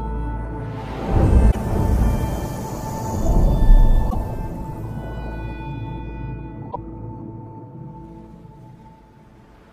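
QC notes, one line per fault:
1.48–1.56 s, 4.06–4.15 s, 6.68–6.76 s: damaged data in a compressed stream. Three short bursts, each about 80 ms, spaced roughly 2.6 s apart, heard as brief glitches cutting into the audio. Some of the compressed frames at those points are corrupted, so the decoder either misreads them and outputs garbage or throws them away and hunts for the next valid frame header. That glitch and resync is the blip you hear.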